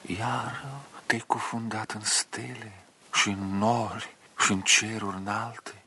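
Nothing stood out on listening to this clip.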